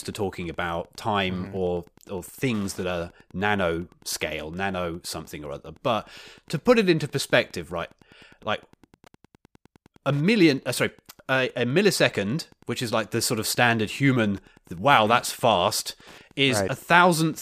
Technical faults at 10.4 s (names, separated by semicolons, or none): Wi-Fi interference